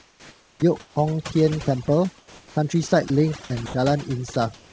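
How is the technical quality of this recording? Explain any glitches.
The recording has one fault throughout and a series of short faults from the sender's voice detector. Across the call path, nothing above 8 kHz comes through, which fits a G.722 wideband codec.

Overdone noise removal runs through the whole clip. The noise suppressor is set so aggressively that any frequency band near its noise estimate is pulled far down or muted. Quiet components of the speech are removed along with the room noise, which sat about 33 dB below the speech. The result is a lowered background that breaks up into twinkling specks.

Comfort noise in place of the background appears from 0.00 to 0.96 s, with about 0.78 s replaced, and again from 2.18 to 2.56 s. The sender likely stopped transmitting when it judged the input to be non-speech, and the receiver then generated synthetic noise shaped roughly like the background. 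In the second stretch the fill sits about 2 dB lower than the real background, which is about 33 dB below the loud parts. The real ambience gives way to a smooth, featureless hiss.

Onset clipped by the voice detector occurs at 0.55 to 0.62 s. The detector was likely slow to register that speech had resumed, so the first 70 ms was never sent and comfort noise covered the gap. The speech that follows starts abruptly, missing its soft beginning.

Sound dropped by the voice detector occurs at 1.86 to 1.88 s. For 20 ms, the detector likely classed part of the speech as background and stopped sending. That short piece of sound is lost and replaced by steady noise. The speech comes back as soon as the detector triggers again, leaving a brief hole.

Sound chopped by the voice detector occurs in three stretches: 2.88 to 3.10 s, 3.44 to 3.74 s, and 4.34 s to the end. The detector likely toggled between sending and muting several times within each stretch. 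In total, 60 ms, 140 ms and 211 ms of sound are replaced by comfort noise in the three stretches. Syllables and word edges drop in and out.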